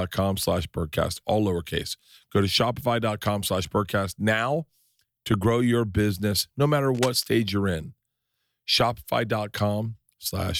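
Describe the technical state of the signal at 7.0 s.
At 7.0 s the speech is overlaid by cable scratch noise, running from 6.94 to 7.17 s, between "your business no matter" and "stage you're in". It is heard as a brief burst of scratchy, rustling noise sitting roughly 10 dB below the speech. The likely cause is a worn cable, connector or control carrying DC being moved, so its contact resistance fluctuates rapidly and injects irregular noise bursts into the signal.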